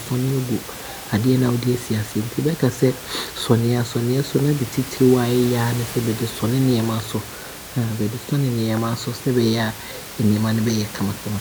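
Nothing goes wrong anywhere in this speech recording; the only thing you'll notice besides the talking is a bit of room noise from where the microphone sits, about 14 dB under the speech, and that's just part of the space.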